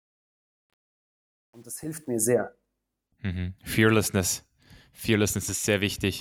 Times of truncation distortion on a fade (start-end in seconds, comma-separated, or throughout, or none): 0.00-2.29